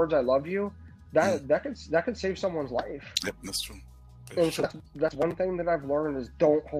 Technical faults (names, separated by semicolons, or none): none